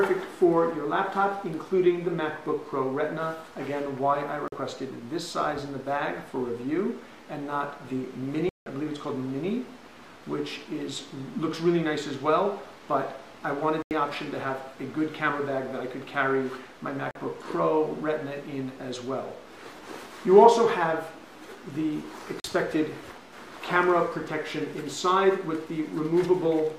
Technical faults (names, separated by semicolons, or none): block of digital silence